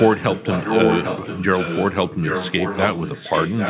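Echo leak runs through the whole clip, from 0 to 3.69 s: a second copy of the speech trails the original by about 0.8 s, only around 5 dB quieter. The likely cause is a far-end speakerphone whose echo canceller let its own playback back into the microphone.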